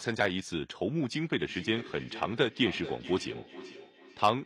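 From 1.49 s right through to the end at 4.45 s, you get feedback echo between two devices. Each bit of speech comes back at a steady interval of roughly 400 ms, peaking at about 15 dB below the talker. What's happening is that two devices in the same room are on the call: one plays out what the other's mic sent, that mic hears it again, and neither echo canceller touches sound it didn't play itself.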